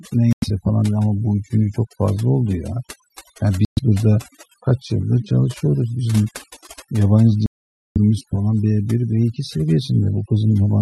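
From the start and throughout, overdone noise removal leaves the background near silent apart from twinkling specks. A spectrogram shows a blank, patchy floor dotted with isolated bright flecks, and the speech harmonics have their quieter bands punched out.

Three gaps cut the sound to silence before it picks up again: 0.33 to 0.44 s (about 95 ms of silence), 3.65 to 3.79 s (120 ms), and 7.46 to 7.98 s (about half a second). The likely cause is a Bluetooth stall, where delayed packets left the playback buffer empty. On a waveform each appears as a flat line between abrupt edges.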